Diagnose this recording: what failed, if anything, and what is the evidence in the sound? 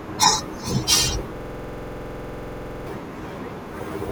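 A system hang loop runs from 1.37 to 2.87 s. It sits at the driver or buffer stage. The computer or driver stalled, but the audio hardware kept replaying the last ring buffer it held. A single 46 ms slice of the speech repeats exactly, about 32 times, at 21.5 Hz. The result is a rough, rapid stutter bordering on a buzz, with no new sound until output resumes. The 46 ms period fits a 2048-sample buffer.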